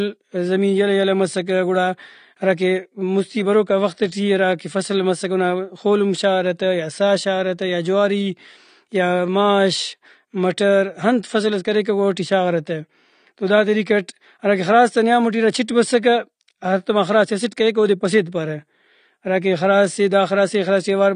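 Speech runs for its whole length with plainly audible AAC compression damage: nothing above 9.7 kHz, a dull smeared top, and a warbly fizz on sibilants, most likely from low-bitrate AAC-LC near 32 kbps. A spectrogram shows a hard ceiling and patchy, holed upper bands.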